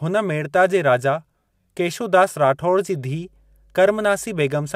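At 3.10 s a mains hum enters and continues to the end of the speech: a steady low tone at 50 Hz, roughly 35 dB below the speech. Power-line current is leaking into the signal path, most plausibly through a ground loop or a nearby transformer. Unlike low-frequency rumble or wind noise, which wander and lack a clear pitch, this hum holds one fixed pitch and level.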